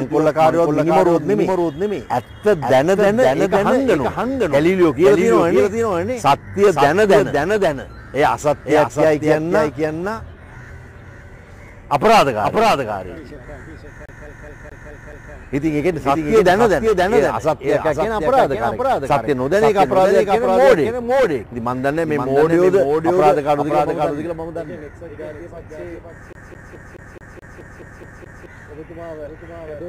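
From start to finish a second full-band copy of the sound trails the original by about half a second, roughly 5 dB quieter. This doubled audio track is likely a second capture through a slower path. Unlike an echo or reverb, the copy has no decay or room colour.

From 14.06 to 15.33 s, and again from 26.33 to 28.46 s, the CD gets stuck on one turn. A 213 ms slice repeats 6 and then 10 times, with a brief mute at each jump. The even, identical repeats set it apart from irregular dropout stutter.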